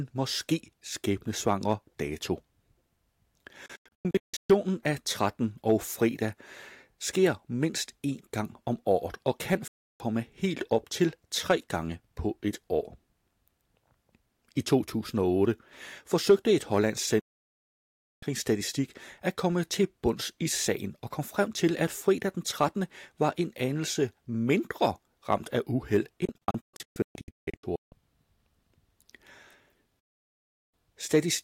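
Speech that abruptly mutes to silence at 3.66–4.50, 9.68–10.00, 17.20–18.23, 26.25–27.92 and 30.00–30.74 s, the first and fourth as clusters of short holes: a digital broadcast dropout, where the receiver lost corrupted frames and muted with a brief fade until clean data returned.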